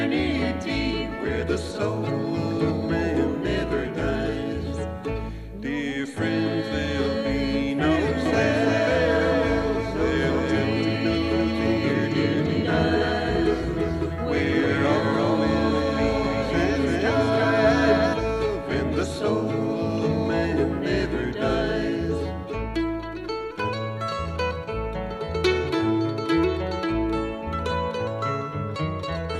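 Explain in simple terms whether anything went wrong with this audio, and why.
From about 8.3 to 18.1 seconds, everything sounds doubled: each sound arrives, then repeats a fraction later, about a third of a second behind, only a little quieter. The repeat is crisp, not a fading room echo, and it switches on and off abruptly. This is a doubled audio track. The likely cause is the same sound being picked up twice, once through a slower route, so the two copies play together out of step.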